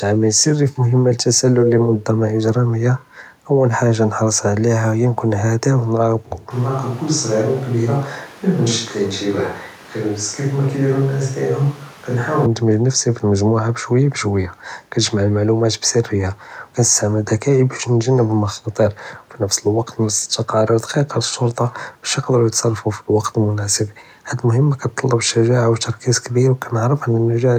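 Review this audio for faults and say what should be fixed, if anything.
From 6.51 s to 12.46 s the speech turns roomy and hollow, loses bass, drops by roughly 5 dB, and carries more background noise, sitting only about 25 dB under the speech. The change is abrupt at both ends. This is most likely a switch to a distant microphone: the close mic's feed dropped out and a microphone further from the talker, with more room sound, filled the gap. Fix it by replacing that section with the close-mic track if a copy exists. To prevent it, monitor and record the close mic on its own protected track with a backup recorder, and check cable and transmitter connections before each take.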